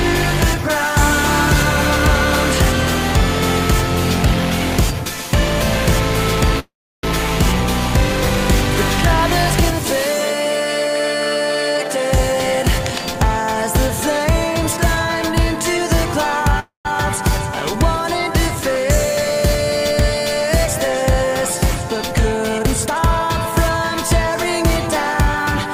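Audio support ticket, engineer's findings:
Call audio freeze at 6.59–7.05 s and 16.60–16.87 s: sound trails off into a fading buzz, then silence (320 ms and 130 ms), then resumes where it stopped. Likely delayed packets draining the jitter buffer; 438 ms and 253 ms inserted, nothing lost.

Jitter buffer speed-up at 11.75–12.33 s (131%) and 22.58–23.29 s (132%): hurried playback at unchanged pitch. Receiver trimming pitch-period slices, roughly a fifth of a second each time, to shed excess buffered delay.

Cable scratch noise at 12.86–13.02 s: brief rustling crackle, about 15 dB below the signal. Likely a worn cable or connector being moved, with contact resistance fluctuating.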